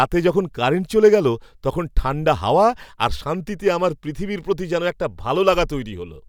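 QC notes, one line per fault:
No faults detected in this recording; nothing to log.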